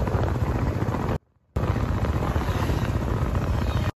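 At 1.17 s the sound cuts out abruptly. It returns at 1.56 s, about 0.4 s later. This is an audio dropout to a faint residue. The gap is not silent. A faint trace of the sound stays audible, roughly 40 dB below its normal level. The change is sudden at both edges, with no fade. The likely cause is a brief loss of the wanted signal while the path after the break stayed live.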